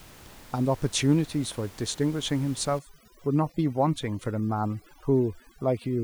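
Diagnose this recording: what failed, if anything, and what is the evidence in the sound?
Overdone noise removal in the call-processing stage, from 2.79 s to the end: with room noise only about 23 dB below the speech, the suppressor mutes bands near its noise estimate. The background drops and breaks up into twinkling specks, and a spectrogram shows scattered isolated blobs and holes in the speech harmonics.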